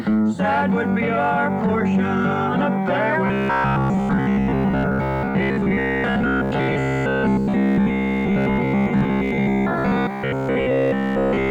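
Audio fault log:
3.27–11.51 s, robotic sound from repeated short buffers: the sound turns into a stiff, metallic buzz pinned at about 66.8 Hz, most likely because roughly 15 ms chunks are being looped while most of the real audio gets dropped.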